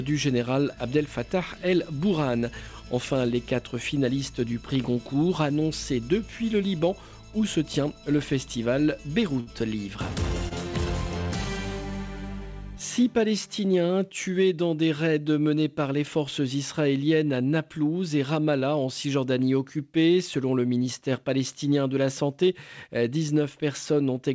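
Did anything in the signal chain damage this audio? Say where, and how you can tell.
Yes. A short stall from a late packet hits twice, at 9.40 to 9.49 s and at 10.49 to 10.53 s. Each time the jitter buffer ran empty. The receiver held the last sound, for 68 ms and then 23 ms, until the packet came. Nothing is lost.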